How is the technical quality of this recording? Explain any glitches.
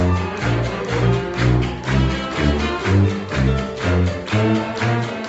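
Nothing stood out as a glitch on listening; the sound tops out at about 8 kHz, which is what you'd expect from a call path at this setting.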